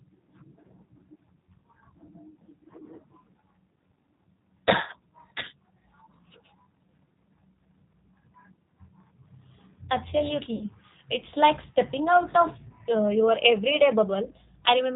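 Throughout, the speech carries G.729 codec damage, plainly audible at 8 kbit/s: the voice is resynthesised from a filter, pitch predictor and sparse pulses, sounding rough and slightly synthetic. A spectrogram shows a hard ceiling near 4 kHz and smeared, grainy harmonics.

From 10.55 to 10.65 s, VoIP packet loss concealed by the speech codec stretches the last sound into a fading buzzy tone or coloured noise. The gap, about 60 ms of lost audio, fits two lost packets. On the waveform, the amplitude decays smoothly instead of dropping out.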